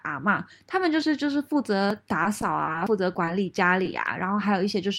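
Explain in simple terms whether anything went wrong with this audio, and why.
Two kinds of fault can be heard in this speech.

At 1.90 s and again at 2.87 s there is a sudden jump in the speech. These are most likely a dropped buffer (overrun): the program fell behind and a short piece of audio was overwritten before it could be read. The two sides are joined directly, with no silence. Roughly 20 ms goes missing at the first point and roughly 70 ms at the second.

From 2.23 s to 2.76 s the speech turns choppy. This is repeated packet loss. Several small pieces of audio failed to arrive in time, the longest about 20 ms. Each hole was patched by stretching out the sound just before it, about 70 ms in total, while about 60 ms was simply lost. The patches cover roughly 13% of that stretch.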